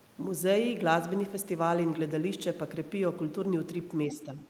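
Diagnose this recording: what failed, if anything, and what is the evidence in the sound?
Call processing is where this one sits. From 4.1 s to the end of the clip, roughly the last 0.4 s, the speech drops by a few decibels and sounds pulled back. That pattern points to speech suppressed in double talk: the echo canceller was likely hearing both ends at once, couldn't separate this talker from the loudspeaker echo, and clamped down on the whole lot, near-end voice included.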